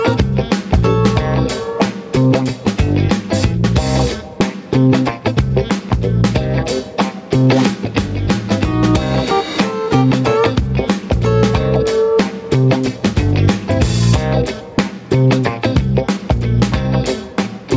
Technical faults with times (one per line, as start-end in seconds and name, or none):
0.00-17.77 gain pumping